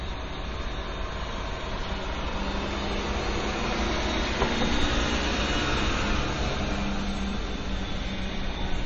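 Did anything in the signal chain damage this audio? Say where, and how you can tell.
Yes, at the codec stage, and the damage runs through the whole clip. Nothing is left above 8.2 kHz, so the top end stops dead at one fixed point. Faint detail swirls and turns watery, and sharp onsets smear. This is most likely MP3 compression starved of bits, which fits a low rate near 32 kbps. The encoder dropped the treble and zeroed weak frequency lines. Those lines flicker on and off between frames.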